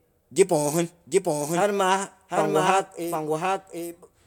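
Speech with a doubled audio track throughout. A second full-band copy trails by about 0.7 s, roughly 5 dB quieter, with no decay. Likely a second capture path.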